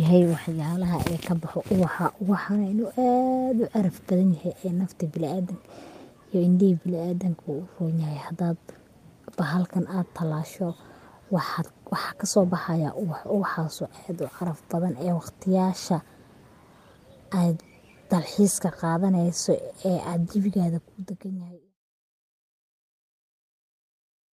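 No technical faults can be heard in this speech, and the gentle fade-out that begins around 20.5 s and finishes at 21.76 s is a smooth, deliberate edit.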